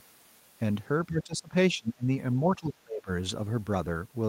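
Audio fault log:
1.07–1.54 s, 1.72–2.09 s, 2.58–3.08 s, speech suppressed in double talk: the echo canceller likely could not separate the local talker from loudspeaker echo while both sides spoke, and attenuated everything. The speech sinks by about 20 dB, then about 25 dB, for about half a second or less each time.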